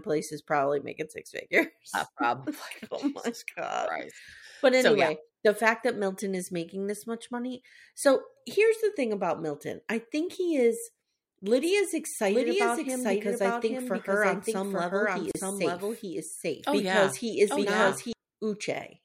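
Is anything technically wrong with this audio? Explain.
Yes, two things. From 11.63 to 18.13 s there's a doubled audio track: a second copy of the speech runs about a second behind, roughly as loud as the original, with no room tail. It starts and stops abruptly, likely a second capture path or an edit leaving two copies out of step.

At 15.31 to 15.35 s there's a gap at a join of encoded pieces, a 36 ms dropout with smeared edges. Two separately encoded sections were butted together untrimmed, so encoder delay and end padding sit in the middle of continuous speech.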